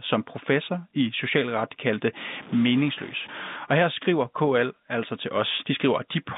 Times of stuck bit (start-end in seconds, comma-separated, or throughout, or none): 2.34-3.56